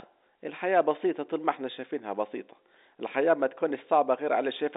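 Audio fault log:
Nothing wrong turns up in this speech, which comes through the G.711 telephone coding as expected with the narrow phone-line band of roughly 250 Hz to 3.7 kHz and only the faintest trace of coding grain, if any.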